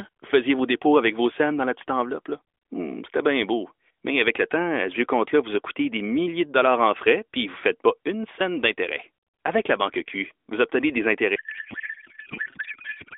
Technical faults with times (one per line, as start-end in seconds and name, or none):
11.36-13.17 codec payload misread